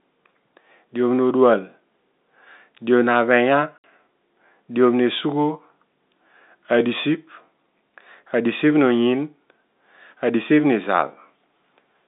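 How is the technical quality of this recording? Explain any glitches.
The speech has one glitch, heard over a telephone-band G.711 line passing roughly 200 Hz to 3.7 kHz. At 3.78 s, packet loss filled with silence leaves a 60 ms hole, which fits two lost 30 ms packets. It has hard edges, not the smeared repetition that concealment would leave.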